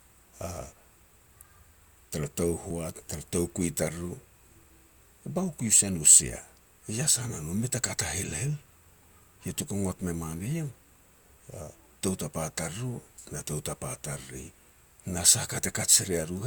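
A speech clip with one tiny skip at 2.71 s, just before "tara toukui": a few milliseconds of audio, roughly 7 ms, drop out, and the sound on either side is butted together with no gap of silence, so the flow jumps very slightly. This is audio missing between chunks, likely from a recorder or processor handling the signal in blocks, which fits 5-second chunks, and losing a sliver while handing over from one block to the next.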